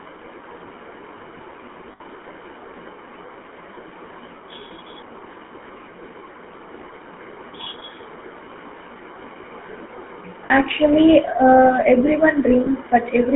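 Throughout, the speech passes through the GSM full-rate codec, whose pulse-driven vocal-tract model, consistent with a 13 kbps stream, rebuilds each frame from coarse excitation. The line band of 200 Hz to 3.4 kHz leaves the voice narrow, with a plainly audible buzzy, gravelly roughness.

Lost GSM frames occur at 1.92–2.01 s (80 ms), 7.64–7.67 s (20 ms), 10.46–10.51 s (40 ms) and 12.64–12.68 s (20 ms). Each time, the decoder repeats the last good frame, holding the sound as a brief rough, metallic ring that is longest at 1.92 s.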